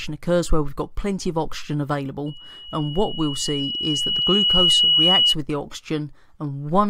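From 2.26 s to 5.35 s a single tone near 2.9 kHz swells over roughly two seconds into a squeal about 5 dB above the rest of the sound. This is loudspeaker feedback squeal: the microphone re-amplified its own loudspeaker until that frequency ran away.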